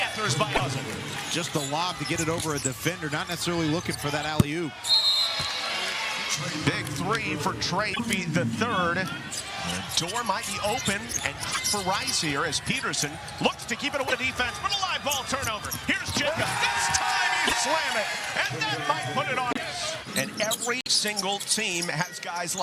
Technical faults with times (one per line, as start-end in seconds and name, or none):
0.54-0.61 broken MP3 bit reservoir
7.93-8.00 broken MP3 bit reservoir
11.51-11.58 broken MP3 bit reservoir
14.07-14.12 broken MP3 bit reservoir
17.46-17.54 broken MP3 bit reservoir
19.50-19.57 broken MP3 bit reservoir
20.81-20.88 broken MP3 bit reservoir